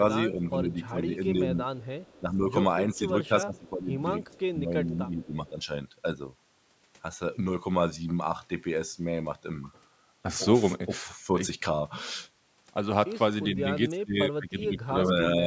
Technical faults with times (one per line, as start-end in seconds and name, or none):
0.27-1.65 speech suppressed in double talk
1.79-2.21 echo leak
2.20-3.93 speech suppressed in double talk
2.95-2.99 echo leak
4.27-5.49 echo leak
4.58-5.58 speech suppressed in double talk
13.56-15.47 speech suppressed in double talk